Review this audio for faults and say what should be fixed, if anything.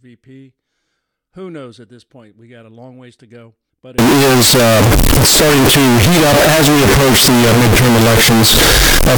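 From 3.98 s to the end, the speech turns into loud, harsh distortion, with quiet moments blasting as hard as the rest. This is likely signed and unsigned mixed up in the 16-bit samples. Flipping the top bit turns each zero crossing into a full-range jump. Declare the sample format explicitly at every conversion stage.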